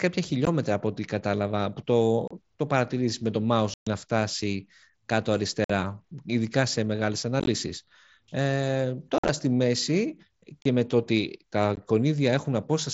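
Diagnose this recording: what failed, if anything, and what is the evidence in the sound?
Unconcealed Bluetooth headset packet loss on the headset link: the speech cuts abruptly to silence at 0.45, 2.28, 3.74 (about 130 ms), 5.64, 7.40, 9.18, 10.62 and 11.76 s. The waveform shows flat, square-edged gaps and the spectrogram full-height blank columns, because missing packets went unreplaced.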